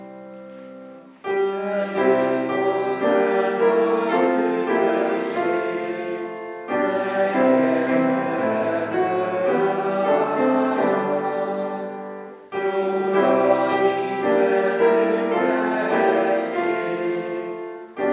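No technical faults can be heard; the audio carries the narrowband character of a telephone-grade call path, with nothing above 4 kHz, which fits a G.711 mu-law codec.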